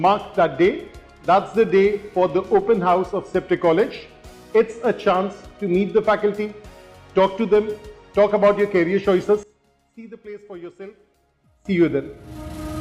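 From 9.43 s to 11.65 s the sound collapses by about 19 dB, leaving a faint residue rather than silence. The likely cause is one channel inverted: with one side's polarity reversed, everything shared by both channels cancels when they are combined, so only their difference survives. That is what separates it from a plain gain dip or dropout, which would shrink or mute the whole sound evenly instead of leaving a faint trace.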